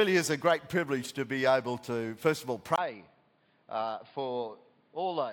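From 2.76 s to the end, the audio turns dull and boxy, losing everything above 4.9 kHz, about 5 dB quieter, with new background noise after a 20 ms gap, likely from an input switched to a poorer device.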